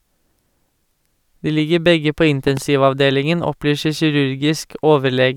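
At 2.48 to 2.59 s, after "ligger begge på", a loud pop sounds twice. It is likely a voltage pulse, peaking around 10 dB over the speech.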